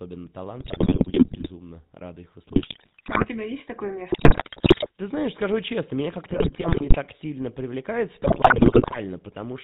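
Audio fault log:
Throughout: GSM full-rate codec. The speech has a buzzy, gravelly roughness and nothing above 4 kHz. The codec models the vocal tract and drives it with a sparse train of regularly spaced pulses that carries only a third of the excitation, which fits a 13 kbps GSM stream.
0.60–1.51 s, 2.48–3.26 s (after "рады их"), 4.10–4.87 s (after "есть такое"), 6.28–6.96 s (before "сильно привлекает в"), 8.22–8.98 s: GSM bit errors. The speech breaks into squawks, pops and gargling. Corrupted filter, pitch and gain values bend the spectrum or spike the level frame by frame, which points to a few percent of bits flipped.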